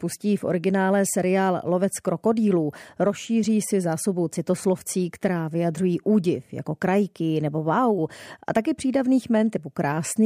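Nothing goes wrong anywhere in the recording, so there's no fault to report in this stretch of speech.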